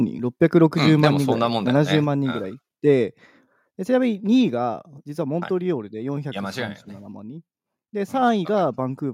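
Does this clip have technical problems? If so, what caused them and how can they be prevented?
Yes. There are two related problems.

Microphone overload: at 0.56–0.58 s and again at 1.04–1.07 s the loudest peaks get a harsh, crackly edge. The likely cause is the mic input gain being set too high, so those peaks ran into the converter's ceiling and had their tops sheared flat. The second one hits harder, roughly 3 dB past full scale against right at full scale for the first, but only a small fraction of samples are squared off each time. Set the input gain lower so the loudest syllables peak a good few dB below full scale.

Microphone volume stepped down: the whole signal, voice and background together, drops abruptly by about 2 dB at 1.05 s, again at 2.04 s, and once more at 4.2 s. The first drop lands right on top of that second distorted peak. That points to the call software's automatic gain control, which likely heard the clipping and pulled the device's input level down in fixed steps. 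Getting the gain right before the call, or turning off automatic mic adjustment in the app, stops those sudden level drops.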